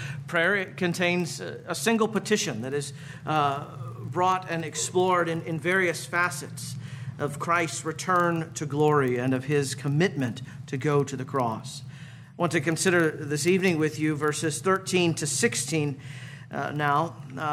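From start to finish the audio carries a steady buzz at 25 Hz, the signature of a filter restarted on every block. The filter discards its internal state at each block boundary and begins again from silence, so every block opens with a small transient. At 25 Hz these arrive every 40 ms, which points to blocks of that length, and they fuse into a buzz whose loudness tracks the level of the underlying sound.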